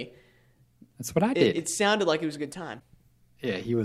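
At 2.76 to 2.81 s the speech is broken by damaged data in a compressed stream: corrupted bytes make the decoder misread frames and lose sync until it finds the next header, producing a brief glitch. A spectrogram shows a short break in the speech pattern; the waveform shows an abrupt discontinuity.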